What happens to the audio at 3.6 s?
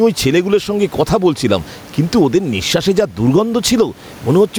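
At 3.6 s the speech is caught in the gain pumping that runs through the whole clip: with the room noise about 32 dB below the speech, the sound is squashed, loud and soft parts pulled closer in level, the gain swinging by around 10 dB. The likely cause is excessive input gain held back by a fast limiter.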